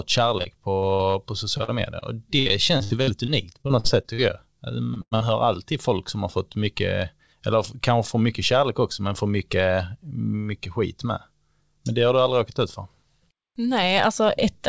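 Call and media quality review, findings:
Repeated packet loss (robotic sound), 0.38–1.15 s and 2.39–4.20 s. Choppy, metallic speech with pieces dropped out. Jitter buffer/decoder concealment: 5 gaps (longest 58 ms) in the first stretch, 11 gaps (longest 66 ms) in the second, each patched by extending the last sound. About a fifth of each stretch is concealed, with gaps landing too close together for the speech to recover between them.

Short concealed packet loss, 1.57–1.61 s, 2.00–2.03 s and 4.94–4.98 s, the last one just before "hör alltid folk som". Brief smear or wobble, and a consonant can be lost. Each hole is about 20 ms, filled by continuing the pitch or noise of the preceding audio and then crossfaded back into the real signal.

Burst of packet loss, 1.63–1.70 s, 5.02–5.13 s and 5.15–5.22 s, the last two just before "hör alltid folk som". A held buzz or fading hiss, then the speech jumps ahead. 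Consecutive packets lost: about 40 ms, 100 ms and 60 ms missing. Concealment extends the last sound and turns it down, and the audio in between is gone. The call path itself has the expected band limit, with nothing above 8 kHz, which fits G.722 at 64 kbps.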